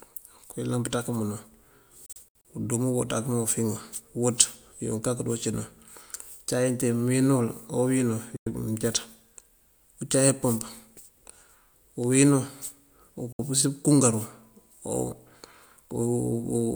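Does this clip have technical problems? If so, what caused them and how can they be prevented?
Yes. Digital broadcast dropouts, where the receiver lost the signal or rejected corrupted frames and muted until clean ones arrived, cut the speech with roughly 3 ms fades. From 2.06 to 2.45 s, about 160 ms goes missing in several holes, the longest 64 ms. A single 96 ms gap falls at 8.36 s and a 64 ms gap at 13.32 s. These hole sizes fit 32 ms frames. Stronger reception, a better antenna or stronger error protection would prevent them.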